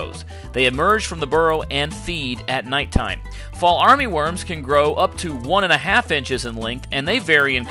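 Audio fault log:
throughout – resampler restarted on every block: each 50 ms block was upsampled alone, consistent with 24 kHz to 48 kHz conversion, leaving a small error at every edge, heard as 20 Hz ticking; spectrograms show thin vertical lines every 50 ms, waveforms tiny boundary steps.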